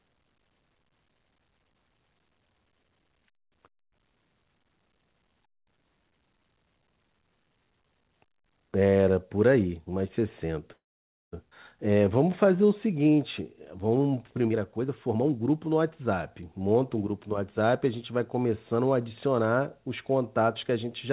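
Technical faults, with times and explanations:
10.72 to 11.34 s, call audio freeze: the sound stops mid-flow and the last fragment is stretched into a short fading buzz. It then drops to near silence for about 540 ms before resuming exactly where it left off, so roughly 0.6 s of dead time has been inserted and nothing is lost. This is likely packets held up in transit while the jitter buffer ran dry. On a waveform it shows as a brief decaying tail followed by a flat line. On a spectrogram the harmonics smear horizontally and then go blank across all bands.
11.5 s, skip ahead: playback jumps forward with almost no gap, a join of only about 12 ms. About 0.4 s of audio is simply absent, and the material on either side is butted together. This happens when audio is discarded while later audio is already queued, which here pulls back the delay the freeze had just added. The waveform shows an abrupt change in envelope at the splice. 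On a spectrogram the harmonic pattern changes discontinuously, often with a thin vertical click line at the join.
11.88 to 14.44 s, jitter buffer slow-down: for about 2.6 s the sound runs at around 90 % speed with unchanged pitch. Sounds are drawn out. The buffer was rebuilding its reserve by repeating single pitch periods over and over, adding about a quarter of a second in total. On a spectrogram, formants and harmonics look stretched in time while staying at the same frequencies. The waveform shows repeated near-identical cycles where vowels are lengthened.
14.47 to 17.01 s, jitter buffer speed-up: immediately afterwards, the sound hurries at roughly 117 % speed, again without any pitch change. The buffer was holding more than its target and trimmed short slices of one or a few pitch periods many times in succession, shedding around 0.4 s. The result sounds rushed and slightly clipped in rhythm. 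On a spectrogram, events crowd closer together with harmonic spacing intact. The waveform shows shortened vowels and tightened gaps between syllables.
The call path behind all of this uses G.711 A-law at 64 kbps. Its band limit is visible throughout as empty spectrogram content above 4 kHz.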